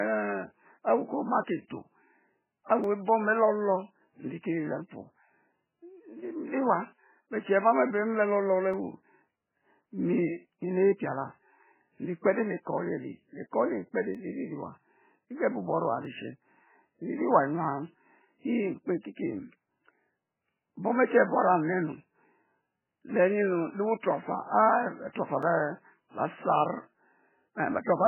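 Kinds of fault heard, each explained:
MP3 compression: The speech sounds dull, watery and swirly throughout, with the treble cut off, and consonant attacks smear. The damage is heavy: weak frequency components flicker in and out from frame to frame, giving a burbling, metallic texture. The likely cause is an MP3 encoder starved of bits, cutting the treble at a fixed point and discarding detail it judged inaudible, which fits a very low bitrate of around 8 kbps.
Dropped samples: Five isolated sharp clicks occur at 2.84, 8.74, 14.15, 16.05 and 25.43 s, each showing as a thin vertical line across the spectrum. No sound goes audibly missing at any of them. The likely cause is a tiny gap in the sample stream, well under a millisecond, so the waveform jumps straight from one value to a later one. That sudden step in the signal produces a brief broadband tick.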